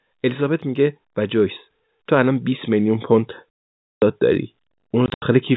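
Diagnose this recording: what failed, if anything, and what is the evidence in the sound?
Automatic gain rising, 0.38 to 3.11 s, in the call processing stage: the level of the speech and the background noise climbs together by about 7 dB over nearly three seconds. The gain control judged the input too quiet and kept raising its gain step by step.

Packet loss filled with silence, at the network stage: a solid 520 ms hole from 3.55 to 4.02 s, then 120 ms of dropouts scattered over 5.06 to 5.22 s, the longest run 80 ms. The hard-edged gaps fit 20 ms packets replaced by silence.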